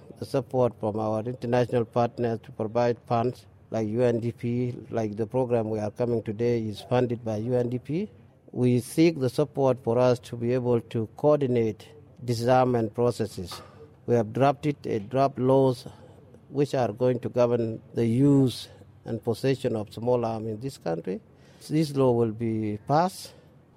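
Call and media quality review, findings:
No audible faults found.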